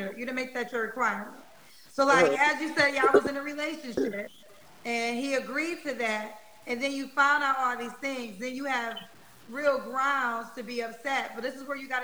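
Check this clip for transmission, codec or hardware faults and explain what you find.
One fault is present, running through the whole clip. A grainy, gritty distortion tracks the sound, roughly 30 dB below it, growing coarse on quiet passages, where the faintest detail sputters or drops out. The likely cause is low bit depth without dither: the signal was truncated to about 8 bits, so its rounding error follows the waveform.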